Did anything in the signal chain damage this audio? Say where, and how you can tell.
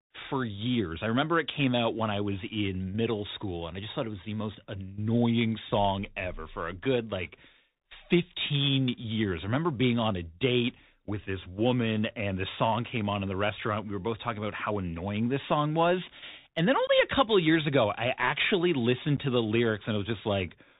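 Yes. At the codec stage, the whole clip carries Bluetooth CVSD headset codec damage. Nothing above 4 kHz survives. S sounds are scratchy, and a granular hiss sits under the speech. The one-bit up-down coder, at 64 kbps, cannot track loud high sounds with its adaptive step.

At the network stage, the Bluetooth link shows unconcealed Bluetooth headset packet loss. There is a hole from 16.87 to 16.90 s, with about 19 ms missing, and a shorter one near 19.17 s. Both have abrupt edges. That fits several lost few-millisecond packets replaced by silence.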